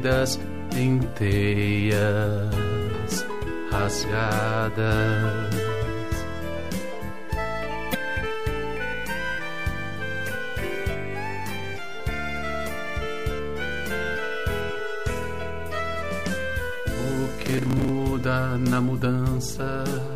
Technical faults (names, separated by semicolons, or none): damaged data in a compressed stream; processor overload crackle